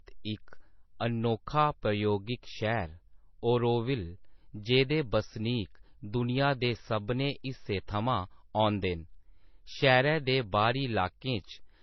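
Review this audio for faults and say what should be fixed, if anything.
Across the whole speech clip the band stops at 6 kHz, and two kinds of artefact sit together. That mix points to transcoding between lossy codecs, likely an MP3 encode near 24 kbit/s re-encoded to HE-AAC near 40 kbit/s. The second codec spent its bits preserving the first one's damage. A single low-bitrate encode would show only one artefact character, not both layered. Prevent it by encoding once from the original uncompressed master.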